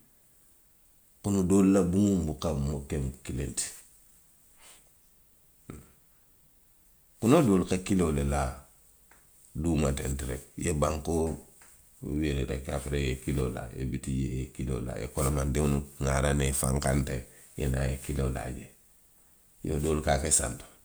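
Nothing technically wrong turns up in this speech recording, so there are no fault times or causes to point to.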